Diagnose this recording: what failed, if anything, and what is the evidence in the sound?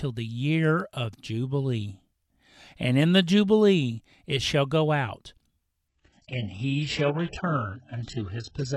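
At the network and codec stage, the adaptive stream dropped to a lower bitrate from 5.88 s to the end, with no gap. The speech suddenly loses everything above 8 kHz and turns thin, which fits a switch from AAC-LC at 96 kbit/s to a very low-rate HE-AAC version.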